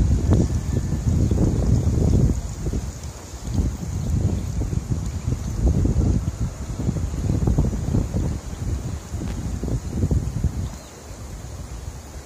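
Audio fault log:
9.28 to 9.33 s, loose connector crackle: a short, irregular burst of scratchy crackle lasting about 50 ms cuts across the audio. It comes from a worn or dirty contact in the signal path that briefly makes and breaks connection as it shifts. Each break chops the signal into fragments, and any DC present on the line turns those interruptions into pops, giving the rough, uneven texture.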